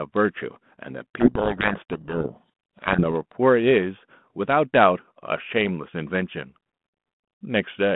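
Speech over a G.726 line at 32 kbit/s, band-limited to roughly 150 Hz to 3.5 kHz with only light codec grit. From 1.20 to 3.06 s there's a codec payload misread: the two ends disagree on the bit order of the G.726 code words, so the decoder rebuilds the wrong difference values and the speech gets buried in harsh distortion until both ends line up again.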